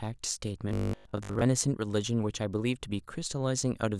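From 0.69 to 1.45 s the speech turns into a rigid metallic buzz at 50 Hz, robotic sound from repeated short buffers, likely from a 20 ms chunk looping while most of the real audio is skipped. A spectrogram shows evenly spaced harmonic lines at 50 Hz multiples, and the waveform repeats roughly over about 70 percent of that span.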